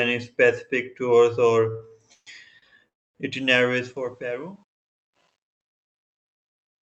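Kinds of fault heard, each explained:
Repeated stalls (stutter): Between 1.71 and 2.64 s the speech catches and drags five times, each gap filled with a smeared continuation of the last sound, the longest 140 ms. About 248 ms of filler takes up roughly 27% of that stretch, yet nothing is lost. Packets on this Opus call path, band-limited to 8 kHz, arrived late or too slowly, so the jitter buffer kept running dry.
Call audio freeze: From 2.88 to 3.17 s the speech halts for about 265 ms, and almost all of that (260 ms) is plain silence before it resumes where it stopped, with nothing dropped. Everything after it is shifted later by the same 265 ms. The likely cause is a hold-up in packet delivery that drained the jitter buffer, leaving the receiver to fill the wait until packets arrived again.
Truncation distortion on a fade: The fade-out that starts around 3.4 s turns gritty and grainy as it gets quieter. 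From about 4.67 s to the end it is at its worst. The coarseness fits a fade computed with only about 10 bits and no dither, so the low-level waveform collapses into a few hard square steps.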